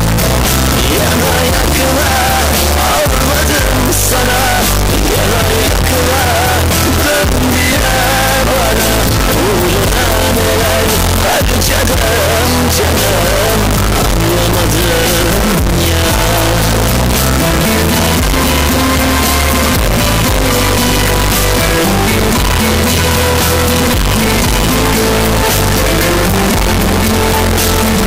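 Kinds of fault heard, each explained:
Float read as integer: across the whole clip the sound is blasted to a harsh, near-square waveform sitting at an almost fixed, high level, with background noise as loud as the main sound. The likely cause is 32-bit float samples being read as 32-bit integers, so each sample's sign and exponent bits set its level. Unlike ordinary clipping, even quiet passages hit that same level, yet the pitch can still be followed.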